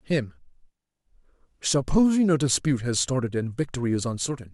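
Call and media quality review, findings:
Nothing stood out on listening to this speech recording; no findings to log.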